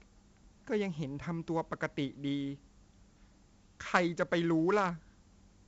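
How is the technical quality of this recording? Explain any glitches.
Quality's pretty rough. Heavy 4-bit ADPCM compression runs throughout the speech, with nothing above about 7.8 kHz. Each sample is coded as a coarse step from a prediction, so grainy hiss rides every loud syllable, and the dull top end fits a 64 kbps stream.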